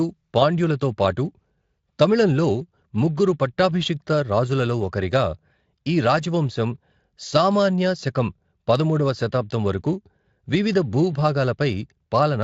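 No technical faults turn up anywhere in this speech; it comes through a Speex connection at a fairly high rate, leaving only a light coding texture.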